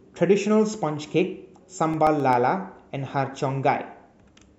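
Speech, with a short burst of CD scratch ticks from 1.80 to 2.33 s: five tiny clicks, each only a millisecond or so, spaced about seven or eight a second. That's a scratch hit once per disc revolution, with the player patching over samples it couldn't correct.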